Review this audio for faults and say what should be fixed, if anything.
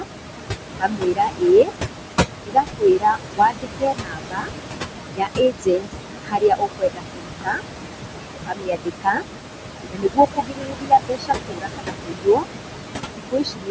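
Noise suppressor artifacts run through the whole recording: the suppressor pulls down bands it judges to be steady noise frame by frame, so the noise sinks between the words and rises under them.

Speech cut by the noise suppressor runs from 0.00 to 13.71 s, with dips of up to about 22 dB. Consonants and word endings get dragged down with the background and sound swallowed, unlike dropouts, which leave hard silent gaps.

The room noise sits about 12 dB and at times only about 3 dB below the speech. That noise belongs to the recording and is not a system fault.

To prevent this, lower the suppressor's strength or raise the microphone's signal-to-noise ratio so speech is not mistaken for noise.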